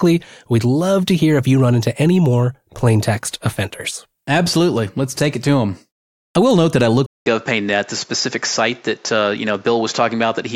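At 7.06 s the speech cuts out for 200 ms. It returns sounding duller and boxier, and stays that way to the end. Nothing is heard above 7.6 kHz after the gap. A new background noise appears, roughly 35 dB below the speech. The loudness stays about the same. This is an input switched to a poorer device. The system likely changed microphones mid-recording, and the new one has a narrower band and its own noise.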